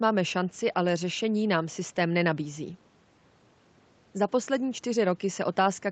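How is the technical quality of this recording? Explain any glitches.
No audible technical faults here.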